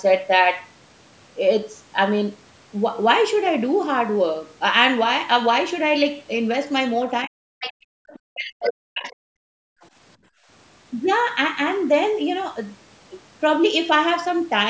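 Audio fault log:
7.24–7.52 s, speech suppressed in double talk: the voice drops away sharply, by around 40 dB, likely because the echo canceller turned down the talker along with the far-end echo.
7.6–9.15 s, other side's voice leaking through: a faint second voice runs under the talker, roughly 15 dB lower, likely loudspeaker echo the canceller failed to remove.
7.8–7.9 s, background gated by the echo canceller: the room sound briefly vanishes, dropping about 36 dB, as the canceller clamps the microphone while the loudspeaker plays.
8.18–9.48 s, speech suppressed in double talk: the voice is turned down, about a second in total and around 40 dB deep, likely the canceller muting both sides during overlap.
9.76–10.48 s, background gated by the echo canceller: the room tone dips by about 23 dB for around a third of a second in total, then returns as the canceller releases.
9.81 s, other side's voice leaking through: a tiny scrap of the second voice slips through, roughly 35 dB below the talker, likely residual echo the canceller missed.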